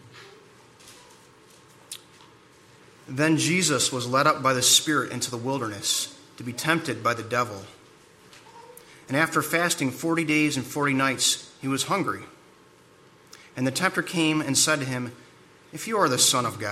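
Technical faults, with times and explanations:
No technical faults can be heard anywhere in this audio. Nothing breaks into the sound at any point.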